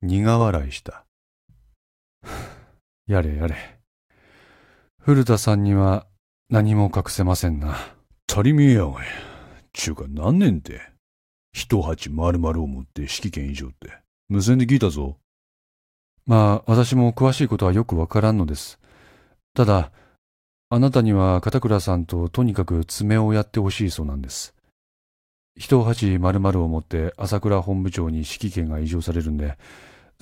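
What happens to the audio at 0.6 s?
Nothing goes wrong at 0.6 s; the speech carries on intact through that moment, with no fault to be heard.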